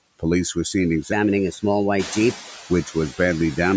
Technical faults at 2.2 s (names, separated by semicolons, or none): noise suppressor artifacts; section at the wrong speed; noise suppressor catching up